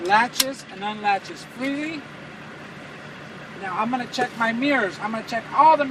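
No technical faults can be heard anywhere in the clip. Nothing in it calls for a timestamp or a note on how something went wrong.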